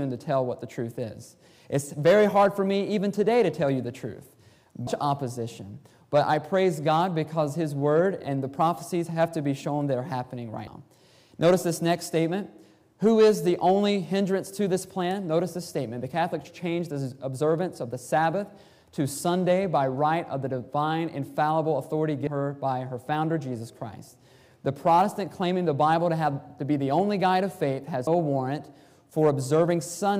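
At 4.87, 22.27 and 28.07 s the sound skips about a fifth of a second, likely audio missing between chunks as six-second recording blocks are joined without a gap.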